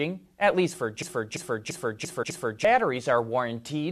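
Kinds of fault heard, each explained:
System hang loop: The system froze while the sound hardware kept replaying one stretch of its buffer. From 1.02 to 2.65 s, a 341 ms slice of the speech repeats five times, a stutter at about 2.9 Hz that fits a 16384-sample buffer. Roughly one and a half seconds of audio never arrives.
Damaged data in a compressed stream: Corrupted bytes in the compressed speech stream make the decoder misread its frames and lose sync while it hunts for the next valid header. Here that produces a brief glitch from 2.22 to 2.24 s, inside the stuttering loop.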